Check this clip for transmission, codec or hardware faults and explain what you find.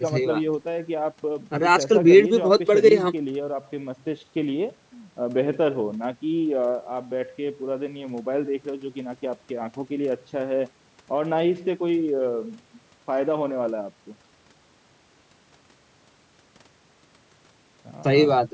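Nothing stood out on listening to this speech recording, which carries only the usual call microphone processing, with the lowest bass trimmed away and nothing above 8 kHz.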